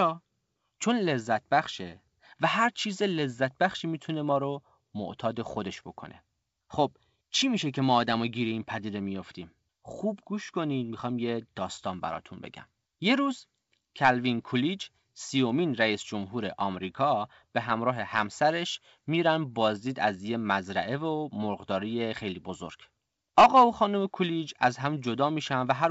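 Nothing stood out on listening to this speech recording.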